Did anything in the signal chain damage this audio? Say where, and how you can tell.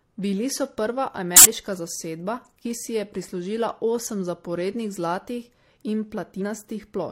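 Yes. At the codec stage, a corrupt frame was decoded from 1.34 to 1.46 s, between "so prva" and "zasedba ki si je". Flipped bits made the decoder put energy at wrong frequencies, giving a loud burst peaking around -5 dBFS, about two frames long. A simple dropout would be silent, not a noisy chirp.

Compressed frames were skipped at 6.37 to 6.42 s, also at the decode or storage stage. The sound jumps ahead by about 50 ms, a whole number of frames. A sample-level splice or buffer gap would give a hard click instead.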